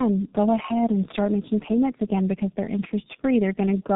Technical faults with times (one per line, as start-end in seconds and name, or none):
0.00-3.95 tandem speech coding